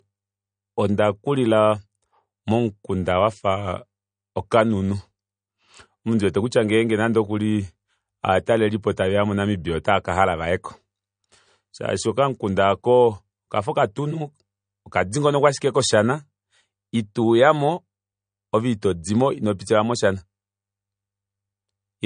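From start to finish the speech has nothing above 9.6 kHz, with a hard ceiling and the coarse, grainy texture of heavy MP3 compression. This is likely low-bitrate audio saved at a high bitrate. The damage fits an encoding near 40 kbit/s, re-saved at a high rate that restored nothing. A plain low-pass filter would leave the top end missing but the remaining sound clean.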